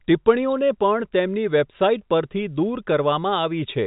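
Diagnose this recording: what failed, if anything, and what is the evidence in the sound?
Nothing has failed: the speech carries the narrow band of ordinary G.711 telephone coding, with no content above about 3.8 kHz and at most a faint level-following quantisation hiss, which fits a 64 kbps A-law line working as intended.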